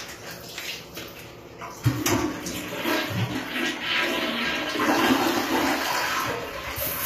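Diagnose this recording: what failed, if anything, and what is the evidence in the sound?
HE-AAC compression runs through the whole clip, a codec-stage fault: the treble sounds synthetic and gritty with plainly audible damage, and nothing reaches above 14.9 kHz. This likely comes from spectral band replication, which copies lower bands upward at a low bitrate near 24 kbps.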